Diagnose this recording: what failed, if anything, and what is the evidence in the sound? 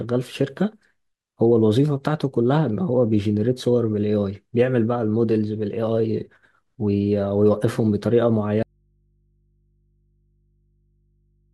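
At 8.63 s the speech drops abruptly into an audio dropout to a faint residue that runs to the end, leaving only mains hum around 45 dB below the speech. The path stayed live, so this is likely a failed analogue connection leaving an open input.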